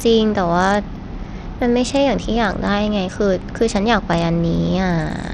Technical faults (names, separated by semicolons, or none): Bluetooth SBC compression